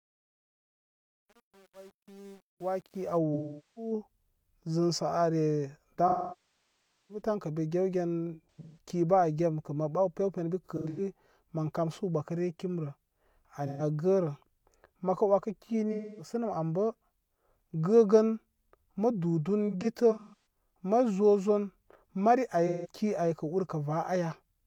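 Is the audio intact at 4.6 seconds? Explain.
Yes, the audio is intact at 4.6 seconds, with no fault present at that moment.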